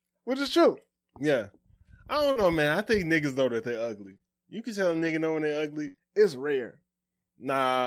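At 2.31 to 2.37 s comes a short concealed packet loss: about 40 ms never arrived, so the receiver extended the preceding sound and faded back in. It is heard as a brief smear. On a spectrogram the harmonics run on unnaturally flat before rejoining.

Overlapping it, from 2.35 to 2.45 s, a lost packet was rebuilt from error correction. Roughly 60 ms, spread over three separate packets, plays from a low-bitrate backup copy. There is no gap, but the sound turns rougher and noisier.

Between 4.01 and 6.02 s, scattered short gaps appear, around five of them, the longest near 70 ms. Together they patch roughly 150 ms, about 7 percent of that stretch. Each is heard as anything from a brief tick or smear to a short dropout, and shows as short smeared or repeated patches in the waveform.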